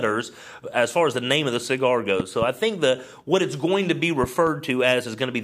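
Loud pops at 2.20–2.45 s and 4.24–4.49 s, each a double thump about 10 dB above the sound, likely voltage spikes from a switch or static.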